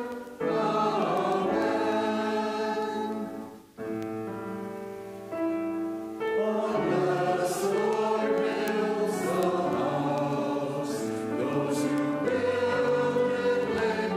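A receiving device running on its own clock, unlocked from the sender's and off by roughly 150 ppm, misreads the digital link. This causes word clock ticks from 0.12 to 14.08 s, sharp clicks about every 0.15 s, each fitting a single slipped sample.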